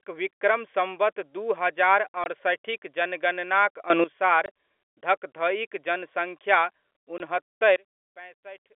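At 2.24–2.26 s the speech drops out completely for 20 ms, with hard edges. The same clipped hole recurs at 4.46–4.48 s and at 7.18–7.20 s. This is packet loss filled with silence: each gap spans two lost packets, which fits 10 ms packets, and the receiver inserted silence instead of concealing the loss. The cut to and from silence is abrupt.

From 3.9 to 4.04 s the speech and the background noise both jump up by about 14 dB at once, then return. This is a sudden gain jump, likely caused by a gain setting or bit shift applied instantly with no ramp, so the level steps from one sample to the next. The telephone-band G.711 coding keeps everything within 300–3,400 Hz throughout.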